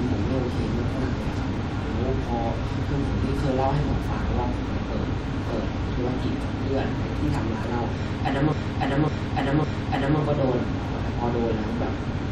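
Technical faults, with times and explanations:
8.52–10.20 s, repeated frames: the speech stutters, with the same 0.56 s stretch replaying three extra times in a row. A short run of compressed frames was sent or stored more than once, so the decoder played it again, lengthening the audio by about 1.67 s.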